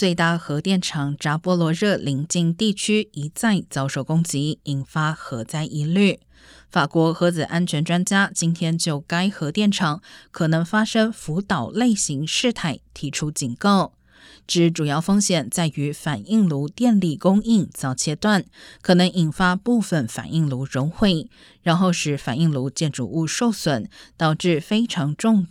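No technical faults are audible anywhere in the speech.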